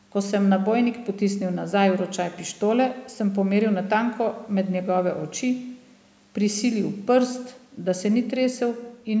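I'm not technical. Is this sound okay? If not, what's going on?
Yes, no faults here; it has passed through a call's microphone processing, which trims the deepest bass and leaves nothing above 8 kHz, as expected for a call.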